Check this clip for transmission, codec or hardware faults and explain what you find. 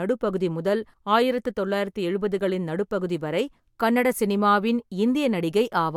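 Nothing here points to a transmission, codec or hardware problem; the speech comes across steady and intact the whole way.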